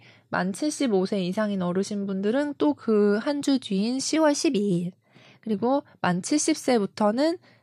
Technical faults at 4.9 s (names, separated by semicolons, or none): wrong sample rate